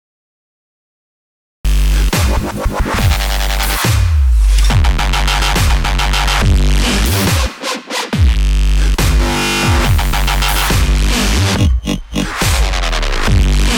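The capture began late: recording or streaming only engaged partway through an ongoing sound, producing a cut-off start. For the first 1.65 s there is nothing but digital silence, and at 1.65 s the audio switches on abruptly in the middle of whatever was already playing. With no natural attack or fade-in, the sound seems to arrive already underway, as if the opening had been chopped off.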